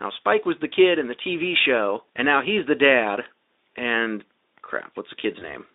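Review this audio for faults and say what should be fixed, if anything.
VoIP packet loss concealed by the speech codec occurs from 5.39 to 5.56 s. The gap points to a single lost 20 ms frame. The decoder filled it by repeating its last pitch and filter with falling gain. This gives a brief smeared patch. Each frame depends on the one before, so the sound stays off after packets return. The narrow Speex line band, about 250 Hz to 3.7 kHz, is audible throughout. Adding a jitter buffer with forward error correction or redundant packets would prevent this.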